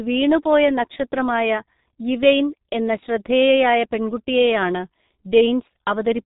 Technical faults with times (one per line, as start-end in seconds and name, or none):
0.00-6.25 G.723.1 codec